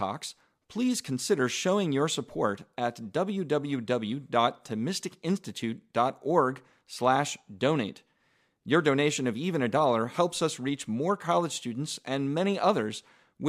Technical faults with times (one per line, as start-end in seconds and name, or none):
none